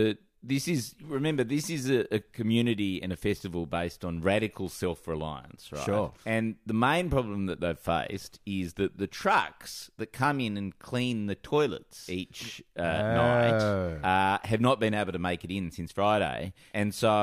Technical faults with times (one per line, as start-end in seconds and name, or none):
none